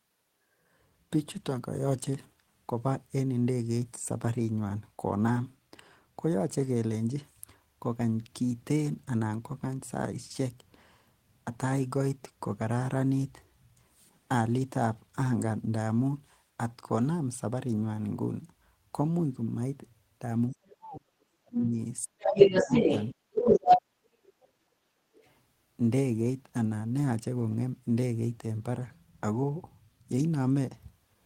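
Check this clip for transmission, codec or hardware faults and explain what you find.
Several faults show up, all between 20.6 and 25.2 s, and all pointing to an echo canceller struggling while both ends of the call were active.

Speech suppressed in double talk, at 20.55–22.25 s, 22.61–22.83 s and 23.6–24.77 s: the speech sinks sharply, by roughly 40 dB in the first and third stretches and a milder 15 dB or so in the second. The likely cause is the canceller mistaking the talker for loudspeaker echo and attenuating everything.

Other side's voice leaking through, at 20.65–20.76 s, 22.22–23.79 s and 25.14–25.23 s: a second voice slips into the microphone signal. The brief scraps sit far below the speech, but the stretch from 22.22 s is louder than it, most likely residual far-end echo the canceller failed to subtract.

Background gated by the echo canceller, at 23.16–23.32 s and 25.05–25.16 s: the room sound briefly ducks, by about 11 dB and then about 21 dB, as the canceller clamps the microphone during loudspeaker playback, then recovers once it releases.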